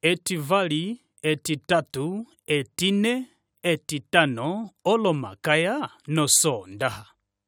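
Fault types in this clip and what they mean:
No faults can be heard anywhere in this speech clip. There are no dropouts, no distortion and no timing problems.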